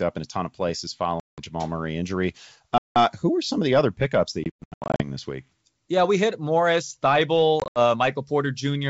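Packet loss on an ADPCM call cuts hard-edged silent holes at 1.20 s after "a ton of places", 2.78 s before "who are some of", 4.44 to 5.02 s between "the other pickups that" and "this week" (about 400 ms lost in scattered runs up to 120 ms), and 7.60 s. The decoder's predictor and step size fall out of step, so speech returns slightly distorted. Waveforms show flat gaps. Spectrograms show blank columns.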